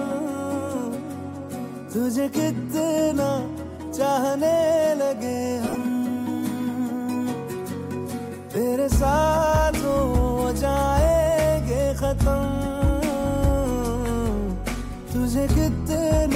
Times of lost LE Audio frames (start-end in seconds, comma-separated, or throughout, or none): 5.68-5.75